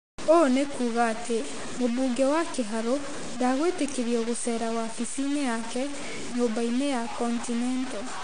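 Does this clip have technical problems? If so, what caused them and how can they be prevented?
Yes. Throughout the speech there is gritty, signal-following distortion, likely low bit depth without dither: the grain sounds like truncation to about 5 bits, with error only about 10 dB below the speech. A waveform shows visible stair-stepping and quiet passages collapsing to flat steps. Keep at least 16 bits, and add dither whenever reducing bit depth.

AAC compression is also plainly audible across the clip as dull, smeared, warbling speech, consistent with AAC-LC at around 32 kbps. A spectrogram shows nothing above 9.8 kHz. Encode at a higher bitrate to keep the full bandwidth.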